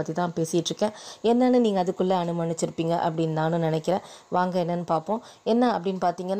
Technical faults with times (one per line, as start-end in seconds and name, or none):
none